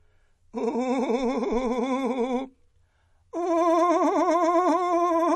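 From start to finish the music carries MP3 compression damage, likely from encoding at a low bitrate around 40 kbps. Nothing survives above 11.5 kHz, and the remaining detail swirls and warbles. A plain low-pass filter would dull the treble without that watery, flickering texture.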